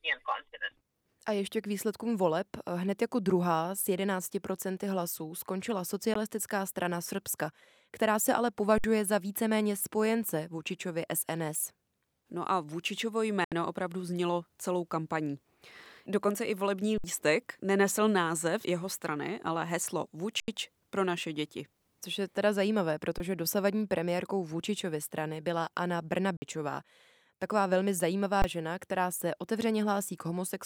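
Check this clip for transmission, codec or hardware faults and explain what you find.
Two faults are present in this speech: short silent holes that are likely Bluetooth dropouts, and repeated freezes from an output buffer underrun with held sample.

The Bluetooth dropout shows up as a cut to silence, once at 6.14 s for about 14.5 ms and again from 13.45 to 13.52 s for about 73 ms. Speech resumes further along, as though it had carried on unheard. The likely cause is wireless audio packets arriving too late at the headphones and being discarded. The short hole fits a single lost packet, and the longer one fits a run of about five.

The underrun with held sample sounds like the speech briefly stopping, then restarting. It occurs at 8.78–8.84 s, at 16.98–17.04 s between "i volební" and "nenesl název jeho strany", at 20.40–20.48 s between "jeho strany ale heslo" and "pro naše děti", at 23.18–23.20 s, at 26.37–26.42 s, and at 28.42–28.44 s just before "žena která se". 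Each time the buffer ran dry and the converter held its last value, giving a flat waveform lasting 20 to 80 ms. Live audio kept moving during each gap, so roughly 20 to 70 ms of speech is skipped.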